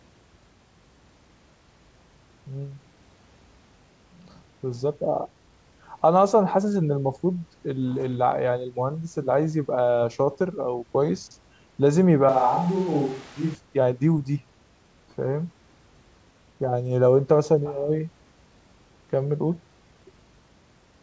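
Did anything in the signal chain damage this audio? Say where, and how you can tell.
Yes. From 12.29 to 13.55 s the speech turns hollow and roomy, drops about 5 dB, and the background noise rises to about 25 dB below it before everything snaps back. The sudden change points to capture, likely a switch to a distant microphone.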